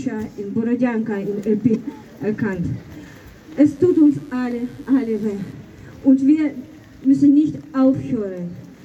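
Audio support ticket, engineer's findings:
Short glitch at 1.71–1.76 s, damaged data in the compressed stream. Decoder hit corrupt frames, lost sync and skipped ahead to the next header.

Mains buzz from 3.67 to 5.53 s, raspy 50 Hz hum with harmonics, about 35 dB under the signal. Probably switching spikes from a dimmer or an unshielded rectifier.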